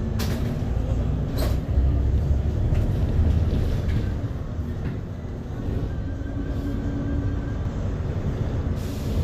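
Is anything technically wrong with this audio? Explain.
Yes, there's a doubled audio track near the end. From about 7.65 s right through to the end, a second full-band copy of the same sound sits roughly 150 ms behind the original, about 5 dB quieter. It's most likely a slower second capture path or an edit leaving two copies out of step. It sounds like a dry slapback echo, with no room colour or decay, and it kicks in abruptly rather than fading up.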